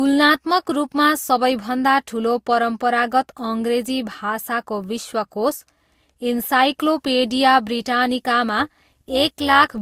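Throughout, the speech has likely passed through two lossy codecs in a row, with transcoding between lossy codecs stacking their different artefacts. That fits a low-rate Vorbis stage followed by Opus. From 8.59 to 9.78 s, frames were overlap-added with windows that don't sum evenly. This overlap-add ripple swings the level by about 6 dB at around 200 Hz, giving a metallic buzz with extra tones around the voice.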